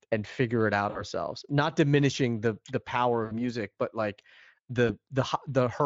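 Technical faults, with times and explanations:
0.89–1.04 s, 3.25–3.33 s and 4.87–4.91 s, VoIP packet loss concealed by the speech codec: right after "and figure it out", between "diminishing the the power" and "music but like", and again near 4.9 s, the speech smears into a brief buzzy tone or coloured noise that fades, and stays thin for a moment afterward. About 60 ms of audio went missing in the first two gaps and about 20 ms in the third, consistent with three, three and one 20 ms frames. The Speex decoder filled each gap by repeating its last pitch and spectral shape at falling gain, and because each decoded frame depends on the previous one, the weakness lingers after packets resume.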